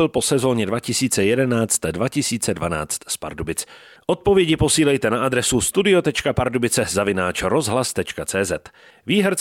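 Nothing in this recording of speech stood out on listening as a technical problem.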